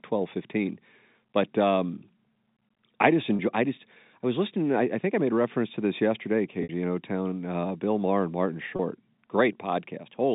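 Packet loss with pitch repetition hits three times: at 3.36 s after "I just", at 6.63 s after "reference to this yesterday", and at 8.76 s. The receiver replays the last pitch cycle to fill each hole, so the 30 ms gaps sound like a brief buzzy hold. The 60 ms gap at 6.63 s fades toward silence before the speech comes back, which fits about two lost packets. All of this sits on the narrow 150 Hz to 3.7 kHz telephone band of the G.711 line.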